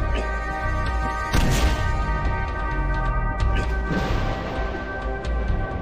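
Nothing is technically wrong with this audio, so there are no times or causes to give.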